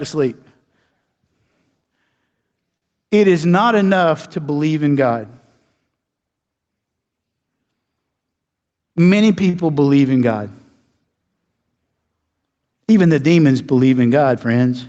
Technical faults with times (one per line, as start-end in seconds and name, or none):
0.00-14.88 gain pumping
2.77-2.85 short stall from a late packet
9.49-9.71 short stall from a late packet